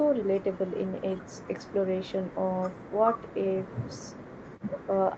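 No technical faults can be heard in this speech; the call path's band-limited sound, with nothing above 8 kHz, is simply how this call carries it.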